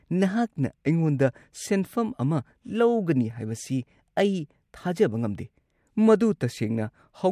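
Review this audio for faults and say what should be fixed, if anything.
No fault can be heard in this speech recording. There is nothing here that needs fixing.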